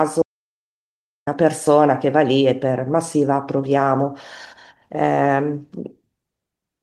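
Speech recording with an audio dropout to silence from 0.22 to 1.27 s. About 1.05 s is silence. The input was likely lost while recording continued.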